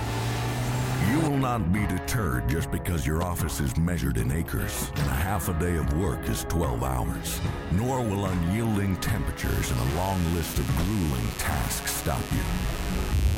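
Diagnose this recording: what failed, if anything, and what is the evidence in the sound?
A mains buzz runs from 9.39 s to the end at 13.38 s. It is steady and raspy, about 15 dB below the sound. The fault is in the analogue wiring. Sharp switching spikes leak in twice per 50 Hz cycle. Their harmonics reach several kilohertz.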